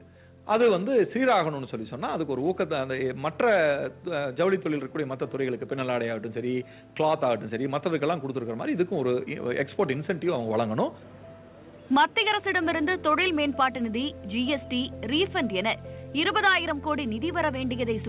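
Input gain, likely set far too high and clamped by a fast limiter, causes gain pumping throughout: the gain ducks around 5 dB under loud sounds, squashing dynamics, while the G.711 mu-law call path leaves nothing above 4 kHz.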